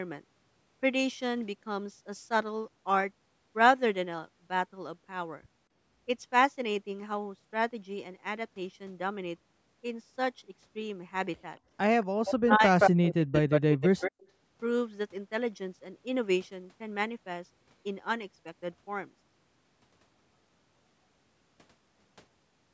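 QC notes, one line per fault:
12.25–12.33 s, 12.51–12.55 s, 12.79–12.91 s and 13.34–14.28 s: echo leak. The far-end echo canceller likely let loudspeaker pickup through, so a copy delayed by 172 ms returns, mostly quieter than the speech but briefly louder near 12.8 s.
12.38–14.13 s: speech suppressed in double talk. The canceller likely confused the overlapping talk with echo and ducked it, so the speech drops by as much as about 40 dB in pieces totalling roughly a second.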